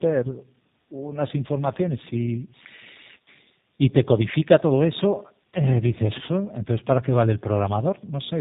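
Tandem speech coding runs throughout: the speech passed through two low-rate speech coders in a row, which fits an AMR-NB to G.729A chain, each re-coding the previous one's degraded output. It sounds rough, muffled and warbly, with nothing above 3.8 kHz.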